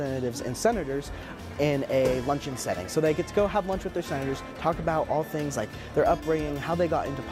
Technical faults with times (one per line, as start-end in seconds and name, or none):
none